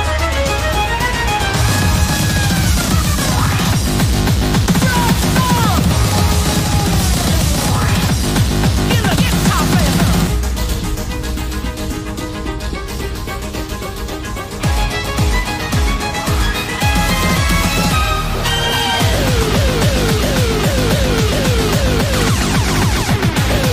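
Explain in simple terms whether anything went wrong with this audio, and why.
Nothing went wrong here: listening all the way through, there's no glitch or problem to point to.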